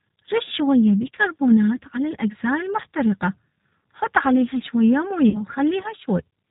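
It's a speech clip carried over a low-rate VoIP link, and the G.729 codec is audible throughout. The sound is band-limited with nothing above 4 kHz, and the voice has that slightly rough, synthetic edge you get when speech is rebuilt from a vocal tract filter, a pitch predictor and a handful of pulses per frame. The damage is plainly audible and fits G.729A at 8 kbit/s. There are also two spots of VoIP packet loss concealed by the speech codec. The first runs from about 2.82 to 2.85 s and fits roughly 20 ms of lost audio, a single packet's worth. The second runs from 5.30 to 5.41 s and fits about 40 ms lost, likely two packets in a row. In both, the decoder fills the gap by stretching its last pitch and filter state into a buzzy tone or coloured noise that fades. Because each frame leans on the one before, the voice stays weak or distorted for a short stretch after the real audio comes back, which is why the disturbance outlasts the loss itself.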